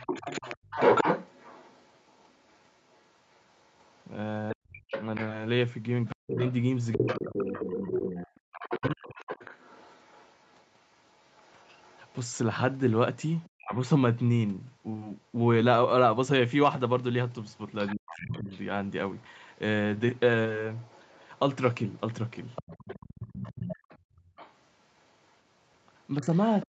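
Speech clip with three kinds of echo-canceller fault. Other side's voice leaking through runs from 0.0 to 13.75 s, roughly 10 dB below the talker, and again from 17.54 s to the end, fainter at roughly 20 dB down. A second voice sits under the speech, likely because the canceller left loudspeaker playback in the microphone signal. Speech suppressed in double talk appears from 4.53 to 9.17 s (about 1.5 s in total), 13.57 to 13.74 s, 17.95 to 18.5 s, and from 23.1 s to the end. The talker's voice dips by as much as 40 dB or cuts out in pieces, likely because both sides spoke at once and the canceller turned everything down. Background gated by the echo canceller occurs at 8.4 to 8.5 s, where room sound falls by about 30 dB, and at 24.16 to 24.36 s, about 17 dB down. The canceller clamped the microphone hard while the loudspeaker played, so ambience briefly dips before recovering.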